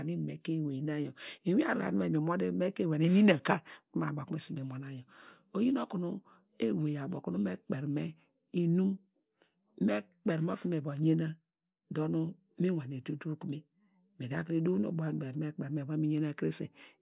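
No technical faults are audible.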